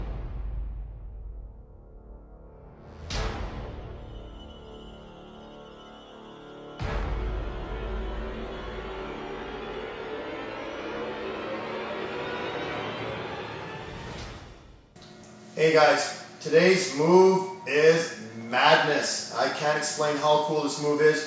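No technical faults can be heard anywhere in the audio.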